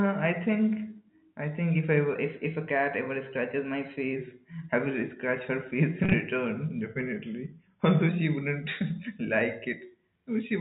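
From 2.15 to 4.16 s, after "I think if I", the audio runs about 5.7% fast and 96 cents sharp, then snaps back before "I will scratch her". Speed and pitch shift together in one abrupt step, which points to a likely drift correction step rather than gradual wow.

From 6.04 to 6.14 s, packet loss with pitch repetition scatters 70 ms of gaps, the longest 30 ms. Each is bridged by a repeated pitch period, so it sounds briefly held and buzzy, not silent like a dropout.

From 6.81 to 8.09 s the rate falls 5.7% and pitch drops 102 cents, a likely second drift correction step in the opposite direction.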